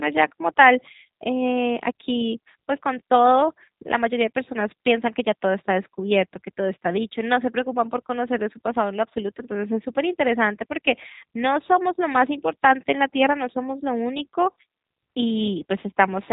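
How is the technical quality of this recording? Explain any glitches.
The quality is limited by low-bitrate voice coding across the whole recording.

The G.729 codec damage is plainly audible from start to end. The speech is resynthesised from a vocal-tract filter, a pitch predictor and a few pulses per frame, giving a rough, slightly synthetic texture. Nothing above 3.8 kHz survives, and the sound points to an 8 kbit/s G.729A stream.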